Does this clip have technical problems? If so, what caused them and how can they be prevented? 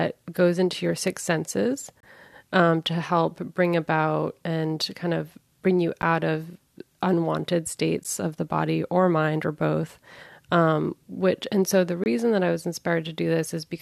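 Yes. Gaps between stream segments occur at 2.00–2.03 s, 6.02 s, 8.04 s and 12.04–12.06 s: misaligned timestamps at 2-second segment boundaries leave hard-edged silences of about 10–27 ms, without losing audio. Prevent this by writing continuous, sample-accurate timestamps so each segment starts exactly where the previous one ends.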